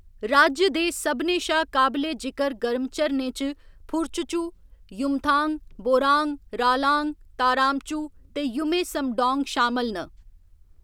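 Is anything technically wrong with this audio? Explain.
No, nothing technically wrong turns up anywhere in this speech recording.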